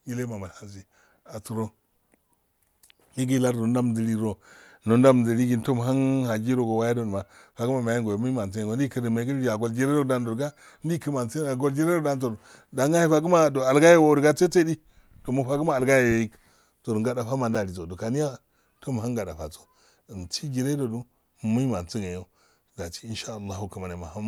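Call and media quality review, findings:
Gap between chunks at 7.54 s and 17.55 s: two holes of about 7 ms in the speech, 10 s apart. Chunked delivery or storage joins leave silence at each boundary. No audio is lost, but playback breaks briefly at each join.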